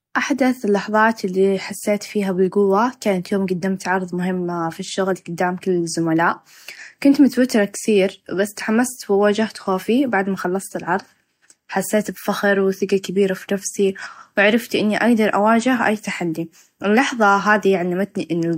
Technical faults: none

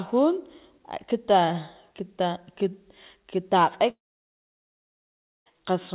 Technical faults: long network dropout

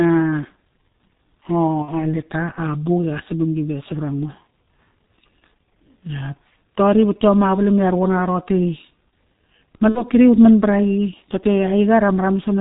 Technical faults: G.723.1 codec; VoIP packet loss concealed by the speech codec

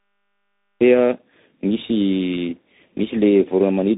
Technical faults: tandem speech coding; cut-off start

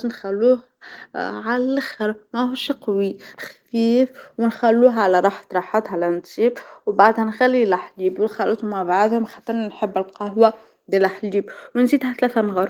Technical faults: none

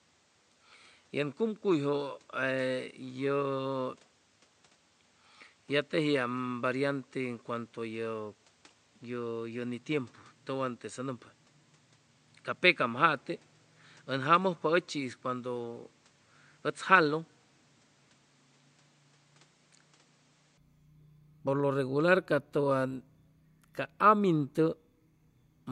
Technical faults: input switched to a poorer device

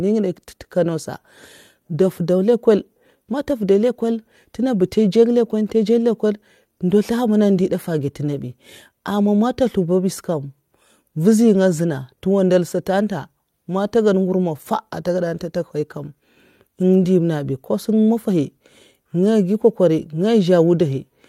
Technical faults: none

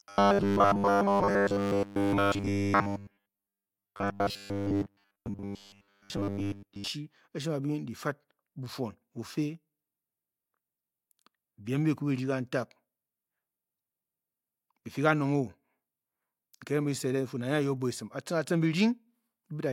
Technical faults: robotic sound from repeated short buffers

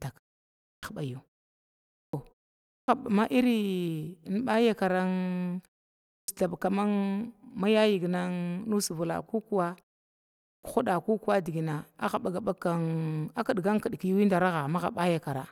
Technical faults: clipped start after a pause

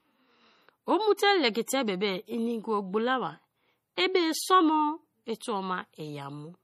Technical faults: MP3 compression; pre-echo

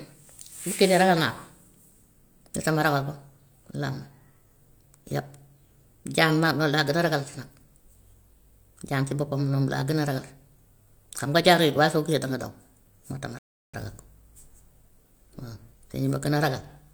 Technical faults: playback stall

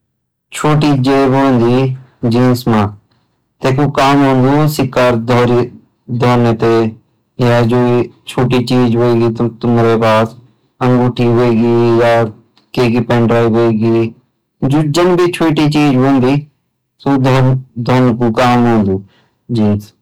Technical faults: hard clipping

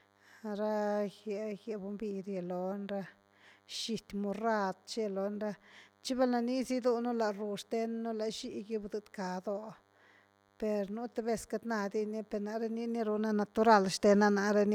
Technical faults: DECT cordless phone buzz

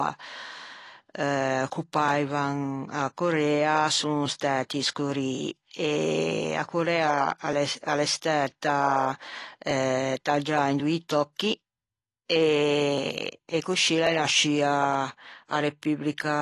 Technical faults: AAC compression; clock drift buffer slips

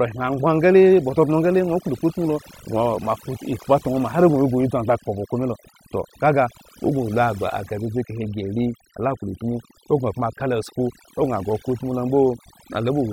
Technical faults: overdone noise removal

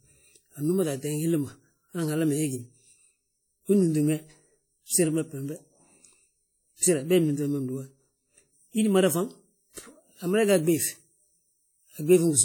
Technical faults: WMA compression

